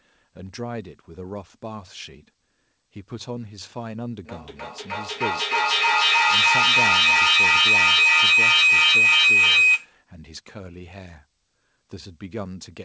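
From 4.25 to 9.96 s, a feedback howl near 3 kHz builds as the speaker-to-microphone loop gains level each pass, its repeats about 0.3 s apart, and peaking about 15 dB over the speech.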